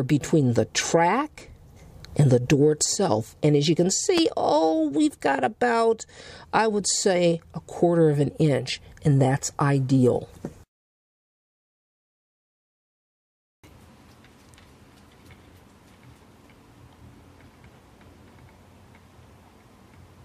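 At 4.18 to 4.21 s a single loud pop stands well above the sound, which continues underneath. It was likely a voltage pulse from a plug, switch or static discharge, shaped into a short thump, unlike a thin digital click or a gap.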